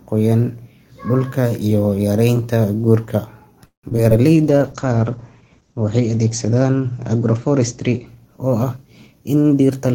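Speech, with four transmission faults. From 3.65 to 4.13 s there is repeated packet loss (robotic sound): four gaps, the longest 180 ms, are filled by extending the preceding sound. Nearly half of that span is concealed, so it turns choppy with pieces missing. At 4.35 s a call bitrate drop begins and lasts to the end, with the encoder falling from 32 to 12 kbps and holding the lowest rate for about 2.5 s. Audio bandwidth shrinks from 20 kHz to 8 kHz, leaving the sound muffled and coarse, with a watery texture. Overlapping the start of that drop, from 4.37 to 4.59 s, a jitter buffer slow-down stretches the audio to 85% speed at unchanged pitch by repeating pitch periods, adding 40 ms as the receiver rebuilds its reserve, so sounds there are drawn out. From 9.06 s to the end a jitter buffer speed-up does the reverse, dropping short pitch-period segments to shed around 150 ms of excess delay. 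Playback runs at about 118% speed with pitch intact, and the final stretch sounds hurried.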